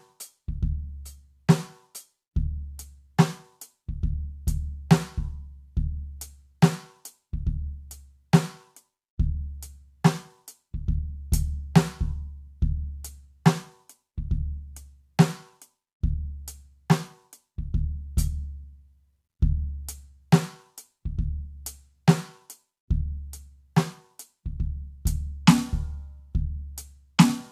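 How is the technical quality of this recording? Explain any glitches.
No glitches or faults heard.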